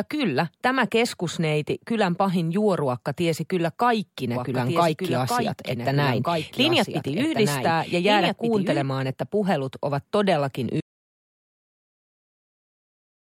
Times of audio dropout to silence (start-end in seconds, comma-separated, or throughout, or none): 10.81-13.27